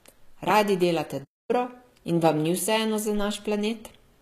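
Throughout the speech, the treble is plainly damaged in a way that points to HE-AAC compression, likely at a low bitrate around 20 kbps. The lower band is coded directly, and the top is rebuilt by spectral band replication up to a cutoff at 14.9 kHz. Unlike plain low-rate AAC, the treble does not simply vanish early. It is present but synthetic, so s sounds come out gritty or metallic.

From 1.24 to 1.51 s, a playback stall cuts the audio to silence for about 247 ms, likely because the player ran short of data or its thread was blocked. This differs from a short dropout or a click because the gap is long and clean, and the sound then picks up again.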